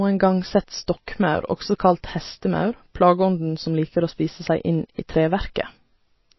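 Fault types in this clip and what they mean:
MP3 compression: The speech has nothing above 5.8 kHz all the way through, so it sounds dull, with the s sounds dulled and a watery, swirly texture where quieter detail flickers in and out. That's likely an MP3 encoder running short of bits, cutting the treble at a fixed point and dropping weak frequency content frame by frame. The damage is plainly audible and points to a very low bitrate, around 24 kbps.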